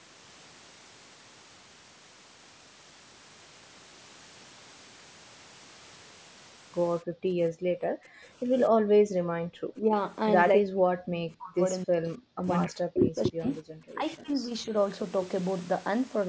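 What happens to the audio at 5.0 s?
At 5.0 s the speech carries on intact, with no dropout, click or distortion, only the ordinary band-limiting of a call microphone path.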